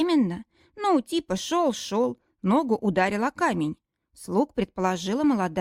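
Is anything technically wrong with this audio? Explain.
No, no technical faults here.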